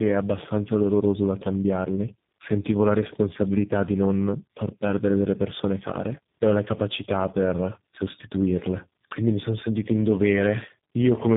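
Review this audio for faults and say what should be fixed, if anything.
Tandem speech coding runs through the whole clip. The speech sounds rough, muffled and warbly, with nothing above 3.8 kHz. The damage fits three low-rate speech codecs in a row, such as G.726 at 24 kbit/s, G.723.1 at 6.3 kbit/s and G.729A at 8 kbit/s. Each coder squeezed audio the previous one had already degraded, so the errors stacked. Prevent it by keeping one codec end to end, or passing coded frames through without decoding.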